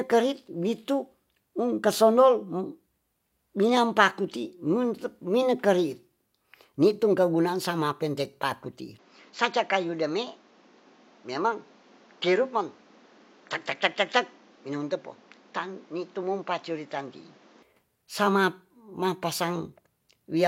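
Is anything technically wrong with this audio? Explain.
Yes, one problem. Right after "keguna'an sama'pen teipa'ku ti'i", at 8.99 s, the speech suddenly loses its top end, with nothing above 7.6 kHz, and drops roughly 5 dB in level, with no gap at the change. A new noise floor comes in about 30 dB under the speech. It's likely an input switched to a poorer device, like another mic or a headset call profile with a narrower band and its own noise. The original sound comes back at 17.63 s.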